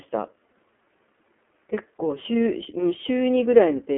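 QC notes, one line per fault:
Throughout, iLBC codec: the spectrogram is empty above 3.6 kHz and thin below 250 Hz. Independently coded 30 ms frames leave plainly audible roughness, which fits 13.33 kbps.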